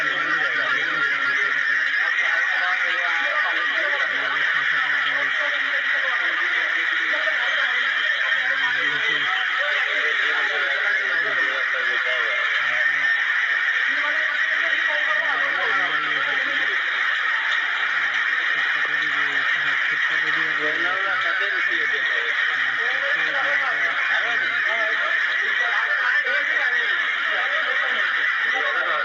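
Nothing is technically wrong with the audio in this clip.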